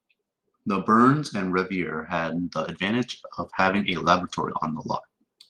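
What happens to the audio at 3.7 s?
The call's bitrate drop is under way here. From 3.11 to 5.15 s, a shrinking bandwidth estimate pushes the encoder from 32 to 16 kbps. The speech is coded more coarsely and sounds rough and watery until the rate recovers.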